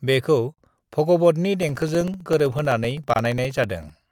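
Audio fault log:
0.54 to 0.58 s and 3.14 to 3.16 s, gap at a join of encoded pieces: the speech stops dead for about 44 ms and then for about 24 ms, with softened edges, and picks up exactly where it left off. Separately encoded segments were joined without trimming, so each encoder's start-up delay and final-frame padding stayed in as silence, and the codec blurred the cut edges.
1.63 to 4.02 s, periodic USB or driver dropouts: starting just after "बेखौ भगवतनि", a steady train of ticks runs through the speech every 64 ms, about 16 per second, heard only where there is signal. Each tick is roughly 2 ms of audio replaced by silence, around forty in all. A background task blocking the USB bus or audio driver at a fixed interval causes these evenly spaced losses.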